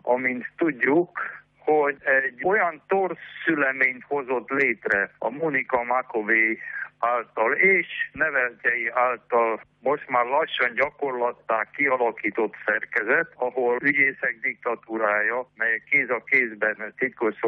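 Nothing stood out on listening to the audio.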